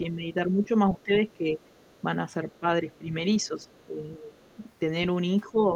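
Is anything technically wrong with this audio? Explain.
Yes. The speech is repeatedly ducked and interrupted, and a faint second voice can be heard underneath it.

Speech suppressed in double talk occurs from 0.02 to 1.51 s, 2.45 to 4.32 s, and 5.46 s to the end. The level sinks by roughly 10 to 15 dB in patches, totalling under a second in each of the first two spans. This is likely an echo canceller that could not separate the talker from loudspeaker echo while both spoke, so it turned both down. On a waveform the envelope shows sudden dips.

The other side's voice leaking through appears at 1.02 to 2.01 s, 2.54 to 2.59 s, 3.44 to 3.86 s and 4.35 to 4.55 s. It sits very low, about 40 dB under the speech. This is likely residual far-end audio left in the microphone signal, which a spectrogram shows as faint separate harmonic traces.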